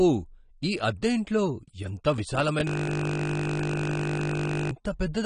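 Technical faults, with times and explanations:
throughout: AAC compression. Nothing is present above about 9.8 kHz, and the speech sounds dull and smeared, with a plainly audible warbling, fizzy texture on sibilants and sustained vowels. The likely cause is low-bitrate AAC-LC coding, in the region of 32 kbps. The encoder lowers its bandwidth to stay within budget and quantises the remaining frequency lines coarsely against its hearing model, so detail is discarded and the texture shifts from frame to frame.
2.67–4.71 s: system hang loop. For about two seconds the audio collapses into a steady buzz at 50 Hz as a single 20 ms fragment repeats exactly, roughly a hundred times, before normal playback returns. The machine or driver stalled while the sound hardware kept cycling through its ring buffer, replaying the same stale block. Because the block is so short, the repetitions fuse into a pitched drone rather than a stutter.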